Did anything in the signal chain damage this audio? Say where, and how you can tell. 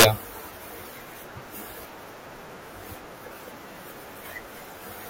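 Yes. A violent, hard crack sits at the very start of the speech, from 0 to 0.05 s, far sharper than ordinary clipping. That is integer overflow at a gain or sample-format conversion stage: peaks driven about 5 dB past full scale wrapped to the opposite sign instead of being limited.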